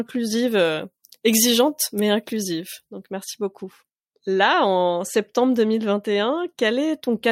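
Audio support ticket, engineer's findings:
Pre-emphasis left on, 0.48–3.13 s, before "merci beaucoup": FM 50 µs de-emphasis missing, treble about 10 dB high at 10 kHz; speech thin, bright, sibilant.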